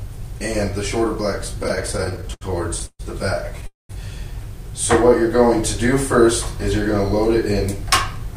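From 1.63 to 2.43 s the audio drags and stutters through 13 brief holds, the longest 80 ms: repeated stalls (stutter), as late packets kept emptying the jitter buffer. At 2.86 s and 3.66 s the sound stops and hangs, extended and fading for 132 ms and then 230 ms, the last 50 and 170 ms silent, before resuming where it left off. These call audio freezes were likely caused by held-up packets draining the buffer.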